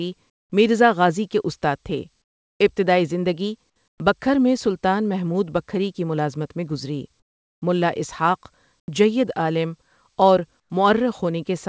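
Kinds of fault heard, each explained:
Comfort noise in place of the background: Most likely the sending side's voice detector judged six short pauses to be silent and stopped sending audio, so the receiver filled each gap with synthetic noise shaped roughly like the background. The real background, already about 50 dB below the loudest speech, turns into a flat, featureless hiss for 80 to 420 ms at a time. It is about 11 to 22 dB quieter in four gaps and about 5 to 8 dB louder in two.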